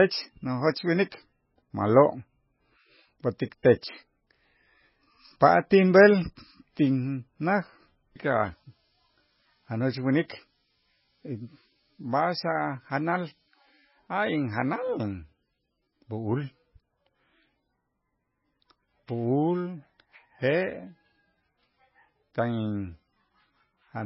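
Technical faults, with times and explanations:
Throughout: MP3 compression. The speech has nothing above 5.5 kHz and a heavily watery, swirling texture with smeared consonant onsets, which fits a very low bitrate around 15 kbps. The likely cause is an encoder starved of bits, cutting the treble and dropping weak frequency lines that flicker between frames.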